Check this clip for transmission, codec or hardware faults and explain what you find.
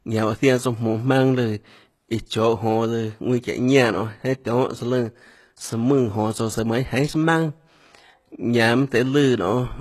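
There's one codec fault running through the whole speech clip. It sounds like HE-AAC compression, likely at a very low bitrate around 16 kbps. The upper band is rebuilt by copying lower bands upward, so sibilants come out gritty and metallic, harmonics up top don't line up, and nothing comes through above 12.3 kHz.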